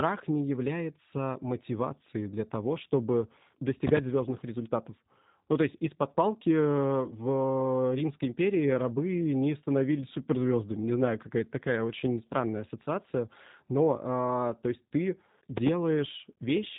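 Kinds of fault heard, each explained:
G.729 codec: The speech runs through a low-rate VoIP codec that rebuilds each short frame from a vocal tract filter, a pitch predictor and a few pulses. The damage is plainly audible. Voices sound rough and synthetic. Nothing reaches above 3.8 kHz, which fits an 8 kbit/s stream.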